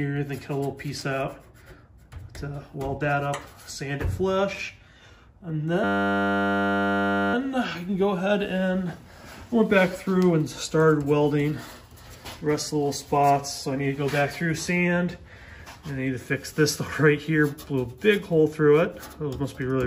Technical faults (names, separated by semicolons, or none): system hang loop